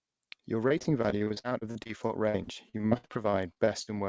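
Choppy, robotic speech runs from 0.68 to 3.89 s, with dozens of brief holes, the longest about 63 ms. This is repeated packet loss (robotic sound): each lost packet is patched by stretching the previous sound, so roughly a quarter of that stretch is filled-in audio. Nothing is heard above 8 kHz, which fits a wideband call codec such as G.722.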